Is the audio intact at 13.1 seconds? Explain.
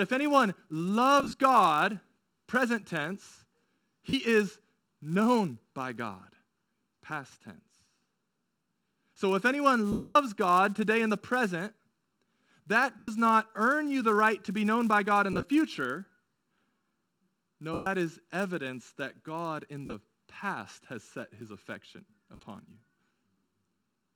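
No. Just before 13.1 s, from 12.99 to 13.08 s, lost LE Audio frames leave a 90 ms hole right before "not earn you the". The LC3 decoder refills it by repeating the last spectrum with randomised signs, which fits roughly a dozen lost frames. The voice turns into a brief noisy smear rather than a clean silent gap or a stutter.

The filter restarted on every block is also present here, as throughout. Each block starts from silence with a small transient, producing a steady 200 Hz buzz that rises and falls with the speech level. That tracking and regularity distinguish it from random clicks.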